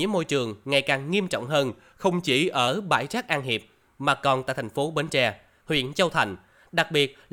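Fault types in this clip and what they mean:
Drift correction step: a clock-matching stage likely changed the playback rate in a single jump to refill its buffer, slowing the speech by about 6% and lowering its pitch by 112 cents, a little over a semitone. Right after "ngày càng nghiêm trọng", from 1.69 to 2.68 s, the speech sounds abruptly detuned and dragged, then snaps back to normal speed and pitch just before "bãi rác".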